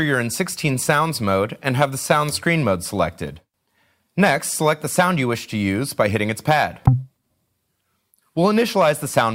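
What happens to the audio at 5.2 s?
Nothing goes wrong at 5.2 s; the audio carries on intact through that moment, with no dropout, click or other fault.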